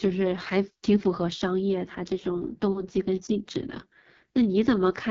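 From start to finish the speech carries the sound of the AMR wideband (HD Voice) codec at heavy damage, with nothing above about 7.4 kHz. The codec rebuilds the voice from a pulse-excited vocal tract model and fills the top band with shaped noise, and the rough, raspy grain suggests the lowest rate, around 6.6 kbit/s. Unlike narrowband phone coding, it keeps sibilance and airy upper content, so the damage is texture, not muffling.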